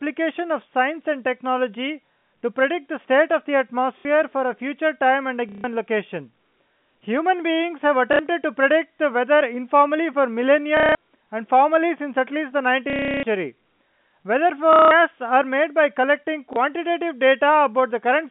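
Speech over a phone line, band-limited by G.711 to roughly 150 Hz to 3.5 kHz, with packet loss and the last packet repeated: scattered blips from 2.07 s, robotic stutters at 3.99, 5.49, 8.13, 10.77, 12.9 and 14.73 s, and a single blip at 16.53 s. Each run of repeats buzzes at roughly 33 Hz, which fits 30 ms packets. The longest stutter is about a third of a second at 12.9 s.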